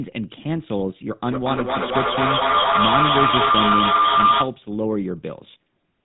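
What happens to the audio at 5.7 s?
The GSM full-rate codec damage heard at 5.7 s runs through the whole clip. This codec models the vocal tract and drives it with a regular pulse train built from only every third excitation sample, with the plainly audible damage fitting its 13 kbps mode. Nothing above 4 kHz survives, and the speech takes on a buzzy, gravelly roughness. That grit sets it apart from a plain narrowband telephone filter, which dulls the sound without roughening it.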